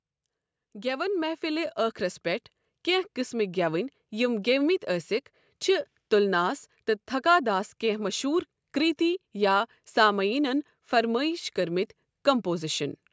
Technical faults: automatic gain rising

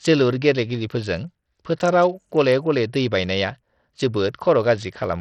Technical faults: Bluetooth SBC compression

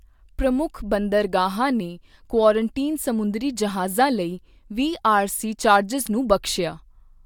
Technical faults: none

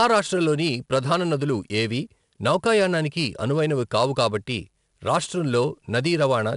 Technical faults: 4-bit ADPCM compression

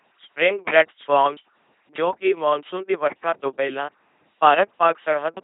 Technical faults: LPC-10 vocoder

